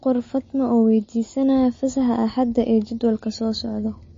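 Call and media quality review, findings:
Whole clip, speech: watery, swirly texture and smeared consonant attacks, with nothing above about 7.2 kHz. Likely MP3 compression starved of bits, fits roughly 32 kbps. Encoder chops the treble, and weak bands flicker frame to frame.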